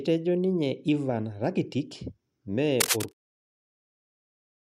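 From 2.80 to 3.31 s a dense, uneven scratching and rustling rides over the speech at roughly the same loudness, continuing past the smooth fade-out that ends at 3.14 s. This cable scratch noise likely comes from a worn cable or connector being moved, its contact resistance fluctuating rapidly.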